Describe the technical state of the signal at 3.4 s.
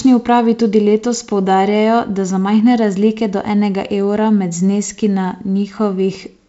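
At 3.4 s the speech is intact, with no fault present, only the wideband telephone coding it passes through, with nothing above about 7.7 kHz.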